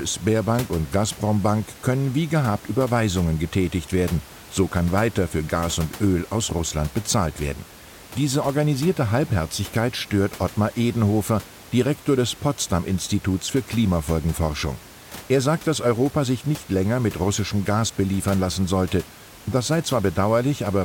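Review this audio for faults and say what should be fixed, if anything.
Nothing needs fixing: the speech signal shows no technical faults, and the background noise of the room sits about 20 dB below the speech as part of the recording itself.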